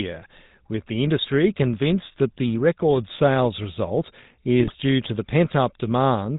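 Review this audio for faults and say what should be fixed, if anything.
The whole clip carries GSM full-rate codec damage, and it is plainly audible. The speech has the gravelly, buzzy texture of a coder that models the vocal tract and excites it with a regular pulse train built from a decimated residual, and nothing survives above 4 kHz, so sibilants and breath detail are missing. The character fits 13 kbps GSM full rate. To prevent it, capture or route the call over a wideband codec such as AMR-WB or a direct digital path.

From 4.6 to 4.75 s there are GSM bit errors: the voice breaks into a short burst of squawk and gargle, with sudden level jumps and a warped spectral shape. This happens when corrupted filter, pitch-lag or gain parameters reach the decoder, so several consecutive 20 ms frames are reconstructed from wrong values. The density of the damage points to a bit error rate of around 2 percent over that stretch. 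To prevent it, improve the radio link margin or apply bad-frame detection with substitution and muting before decoding.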